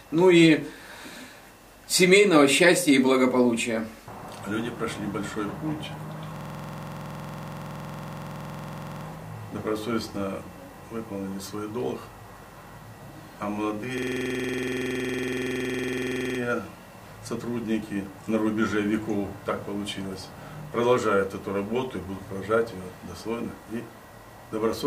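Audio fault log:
6.36–9.06 s and 13.98–16.39 s, system hang loop: the system froze while the sound hardware kept replaying one 46 ms buffer, which fits 2048 samples, producing a 21.5 Hz machine-gun stutter.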